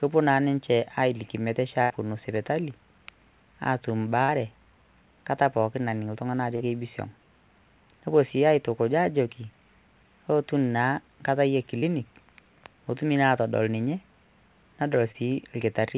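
At 1.82 to 1.92 s the speech stalls into a held, fading sound for about 80 ms and then picks up slightly further on. This is a burst of packet loss: the receiver stretched the last audio across the gap while lowering its level, and the missing stretch is never heard.

Brief smears or wobbles follow at 4.24, 6.56, 11.78 and 15.12 s. These are short concealed packet losses of about 40 ms each, and about 20 ms for the last. Each time the decoder briefly continued the preceding sound before blending back into the real audio. The call path's band limit means nothing sounds above 4 kHz, which fits a G.711 telephone codec.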